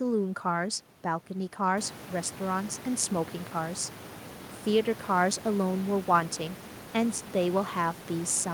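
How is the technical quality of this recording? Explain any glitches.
No glitches or faults are audible.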